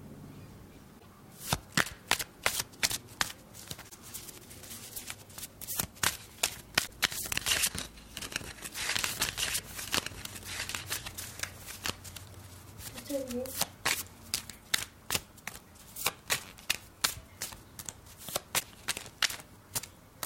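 At 0.98–1.06 s, 3.88–3.94 s and 6.86–6.90 s, the audio skips forward with a brief chirp, noise burst or short hole, one to three frame lengths of about 26.1 ms each. This is likely a broken MP3 bit reservoir: frames after a cut fetch borrowed bits from the wrong data.

From 8.96 to 14.49 s, a doubled audio track enters and leaves abruptly: a dry, full-band copy about 5 dB down, trailing by roughly 2 s. It is likely a second, slower capture mixed in.

The same reservoir glitch recurs at 9.58–9.61 s and 18.59–18.63 s.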